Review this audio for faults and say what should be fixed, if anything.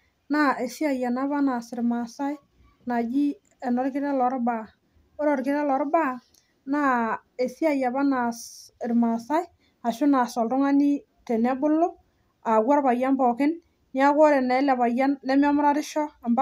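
No faults found; nothing to fix.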